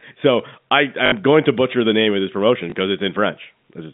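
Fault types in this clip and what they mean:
Packet loss with last packet repeated: missing audio was patched by replaying the previous chunk, giving a buzzy stutter after "so I" and a small blip later.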